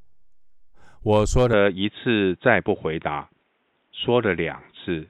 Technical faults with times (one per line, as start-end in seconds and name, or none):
1.53-5.09 input switched to a poorer device